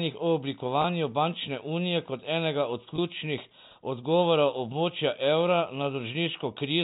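Packet loss with pitch repetition occurs at 0.82 to 0.84 s, just before "bančne unije kot enega", and again at 2.96 to 2.98 s, right after "unije kot enega od". Each gap of about 20 ms, which fits a single lost packet, was bridged by repeating the last pitch period. Through the G.711 telephone band, this sounds like a brief held, buzzy catch in the speech.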